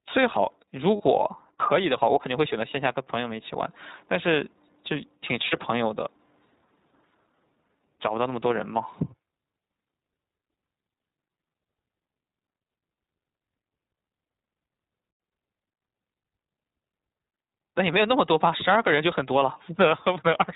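The whole clip passes through the iLBC codec, which fits its 15.2 kbps, 20 ms-frame mode. The band is cut off at 4 kHz, and the speech sounds plainly rough and synthetic.

At 0.96 to 1.01 s and again at 5.48 to 5.58 s, lost iLBC frames, about 40 ms each time and consistent with two 20 ms frames, are concealed by repeating the last pitch cycle with added noise. Each gap becomes a brief held, buzzy vowel before the speech snaps back.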